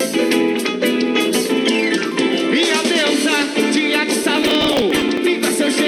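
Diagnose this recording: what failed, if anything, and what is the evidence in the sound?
Processor overload crackle at the driver/buffer stage, 4.23 to 5.18 s: dozens of skipped sub-millisecond buffers form a dense gritty burst, unlike an isolated dropout or click.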